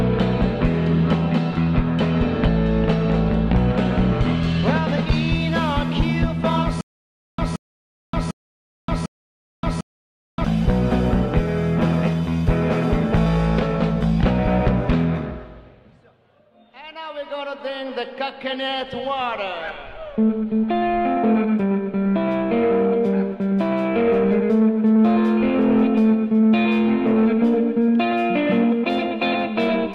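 From 6.81 to 10.45 s, a stutter with silent gaps: a 175 ms burst repeats four times with 575 ms of digital silence between, likely from a stalled stream.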